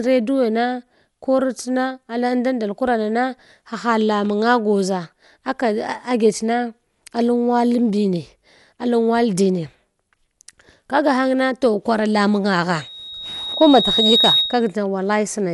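Right from the start the speech sounds dull and plainly gritty, and it stays that way to the end. Nothing comes through above about 11.5 kHz, and there's a rough, fluttery haze hanging around the voiced sounds. That points to Dolby Digital compression, likely AC-3 run hard at something like 64 kbps. At that rate the encoder trims the top of the band and starves a lot of frequency lines of mantissa bits, so the decoder fills them with dither noise, and that's the flutter you hear.

Then at 12.80 s a loudspeaker feedback squeal kicks in. A single tone at 3.8 kHz creeps up over a second and a half or so until it sits about 5 dB above the speech, and it keeps ringing until it cuts off at 14.72 s. What happened is the mic caught the speaker it was feeding, and at that one frequency the loop gain went past one, so the tone kept feeding itself and swelled into that piercing whistle.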